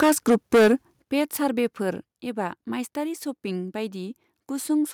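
From the very start to 0.73 s the speech shows microphone overload: the peaks are flattened and carry a harsh, crackling edge. The input was likely driven about 10 dB past the converter's ceiling, so roughly a sixth of the samples in that stretch are squared off. On a waveform the tops sit pressed flat, and a spectrogram shows smeared broadband energy above the speech harmonics on the loudest syllables.

The microphone volume is stepped down three times. The first step comes at 0.03 s, while the overload is still going on, and drops the level by about 3 dB. The second, at 1.02 s, takes away about 10 dB, and the third, at 2.04 s, about 5 dB. The cause is likely automatic gain control reacting to the clipping. Voice and background fall together in each step, which shows as abrupt downward steps in the waveform envelope and a sudden dimming across all frequencies on a spectrogram.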